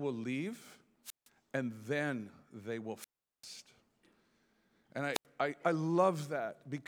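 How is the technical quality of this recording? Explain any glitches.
The quality takes a hit from three wireless microphone squelch dropouts. The first runs from 1.04 to 1.29 s, just before "and then they will", and mutes for about 160 ms. The second, from 2.97 to 3.47 s right after "and then they will", is the longest, with a hole of about 390 ms. The last, from 5.12 to 5.25 s, comes just before "I I" and mutes for about 85 ms. Each time the analogue FM link fades, the receiver's squelch closes, and you hear a quick swell of hiss, near-silence, then the speech coming back.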